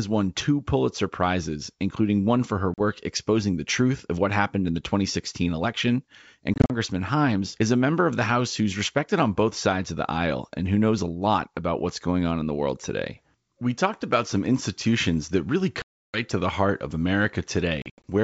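Hard-edged silent gaps break the sound four times, each followed by slightly distorted speech before it settles: 40 ms after "including one for her" at 2.74 s, scattered dropouts from 6.54 to 6.71 s, a 320 ms hole after "some institutions that really" at 15.82 s, and scattered dropouts from 17.82 to 18.03 s. This is packet loss on an ADPCM call. Lost packets became silence, and the decoder's predictor and step size drifted from the sender's until they realigned within the clear G.722 wideband sound.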